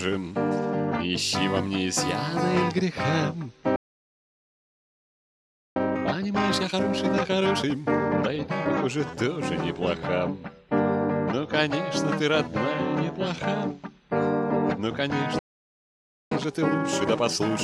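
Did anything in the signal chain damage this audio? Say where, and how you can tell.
Yes. Playback stalls at 3.76 to 5.76 s and 15.39 to 16.32 s cut the sound off mid-flow for 2.0 s and about 0.92 s. This likely means the player's buffer ran dry or its thread blocked, leaving the output silent until playback resumed.

Time-compressed catch-up follows each stall, from 5.76 to 8.76 s at 1.5 times speed and from 16.32 s to the end at 1.25 times. The sound is hurried at normal pitch as the player splices and cross-fades out short pieces to drain its backlog.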